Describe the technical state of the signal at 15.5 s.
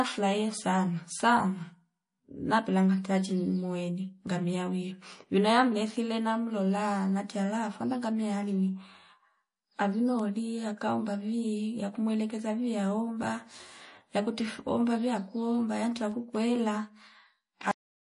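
At 15.5 s, like the rest of the clip, the speech carries clearly audible MP3 compression, likely from a low-bitrate encode around 40 kbps. Everything above about 10.6 kHz is gone, and weak frequency lines flicker between frames, giving that watery, swirly texture and smeared attacks.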